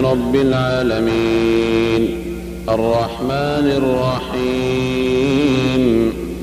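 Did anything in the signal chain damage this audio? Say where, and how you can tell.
Yes. A steady buzz at 75 Hz, with a layer of hash above it, runs under the whole clip at about 20 dB below the wanted signal. This is video or display buzz, picked up in the analogue wiring. A monitor or video cable running at a 75 Hz field rate is coupling its refresh energy into the audio path, so the hum tracks the picture's field rate rather than the mains frequency.

At 0.68 s the audio jumps forward. About a tenth of a second of sound is simply gone. That is compressed frames skipped, a codec or storage fault: a couple of frames, each 46.4 ms long, were missing or rejected as damaged and never decoded.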